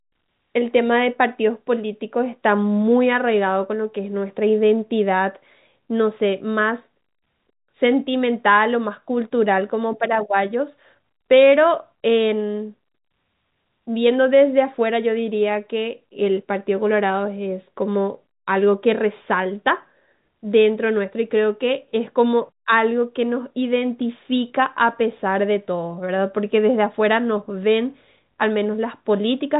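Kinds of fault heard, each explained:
No faults can be heard in this speech recording.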